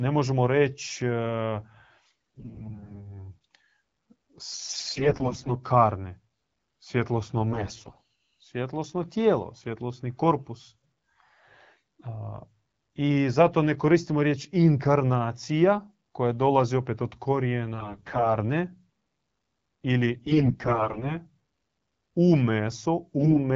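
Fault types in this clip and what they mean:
AMR bit errors at 2.0, 4.5, 7.5, 17.7, 20.1 and 23.2 s: flipped low-priority bits misplace the excitation pulses and skew fine pitch, gain and spectral values, so speech keeps its level and rough pitch but turns hoarse, scratchy and gargly for up to a second.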